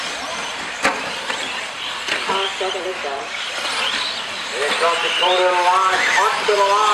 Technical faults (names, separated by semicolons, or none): none